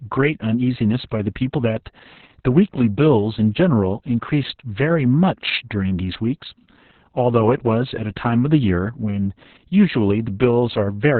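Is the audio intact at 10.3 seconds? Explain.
No, at 10.3 s it's still carrying the Opus voice compression that runs through the whole clip. The codec has dropped to narrowband SILK, so nothing survives above 4.3 kHz, and the coarse excitation coding makes the speech muffled, hoarse and a bit robotic, consistent with roughly 6 kbps.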